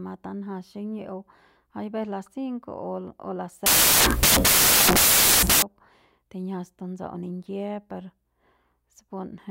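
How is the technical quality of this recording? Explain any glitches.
The recording has one serious glitch. From 3.66 to 5.62 s, right after "o las", the speech is swamped by a loud burst of harsh broadband noise. These are samples built from the wrong bytes: the decoder assembled each sample from a misaligned or swapped pair of bytes, so the rapidly fluctuating low-order bits landed in the most significant position, turning fine detail into near-random, loud hiss for about two seconds.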